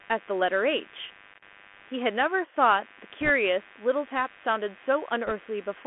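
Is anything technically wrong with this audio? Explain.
Yes. The whole clip has computer activity noise. A buzz pulses at around 100 times a second, sitting roughly 25 dB below the speech. Processor or mouse load disturbs the ground the audio circuit shares. So the buzz follows the computer's activity, not the speech.

The speech has also passed through the Bluetooth CVSD headset codec, which fits a 64 kbps CVSD stream. The band runs only from 250 Hz to 3.4 kHz, so it sounds thin and narrow. The codec sends one up-or-down bit per sample with an adapting step, and loud high sounds outrun it. S sounds turn scratchy, and a grainy hiss lies underneath.

Bit errors on a Bluetooth voice link appear twice, from 3.20 to 3.30 s and from 5.27 to 5.32 s. Flipped bits carry little weight in this codec, and the errors fade quickly, so there are no sharp clicks. Instead a brief rushing crackle rides on the speech. 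It is heavier in the second burst, where the error rate is higher, around 1.5 percent against about one.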